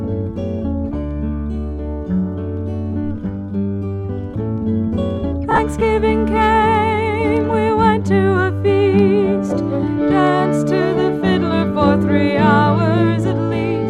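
From 5.51 to 5.59 s, lost LE Audio frames: about 37.5 ms of Bluetooth data went missing in short gaps scattered over 75 ms. The LC3 decoder refilled each gap from the previous spectrum with randomised signs, so the sound briefly smears into noisy grain.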